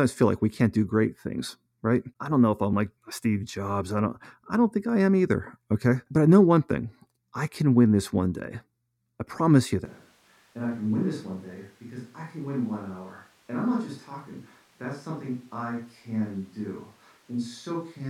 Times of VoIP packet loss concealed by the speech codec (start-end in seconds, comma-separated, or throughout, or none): none